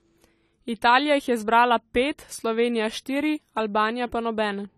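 From start to finish the speech carries AAC compression damage, likely from AAC-LC at a low rate, around 32 kbps. Nothing survives above 14 kHz, so it sounds dull, and the coarse quantisation leaves a plainly audible smeared, swirly texture on the voice.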